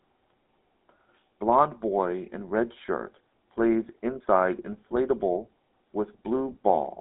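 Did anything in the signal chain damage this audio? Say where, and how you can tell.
Yes: GSM full-rate codec damage runs throughout, at the codec stage. Nothing sounds above 3.8 kHz, and pulse-driven vocal-tract modelling, fitting 13 kbit/s, leaves a buzzy, gravelly roughness.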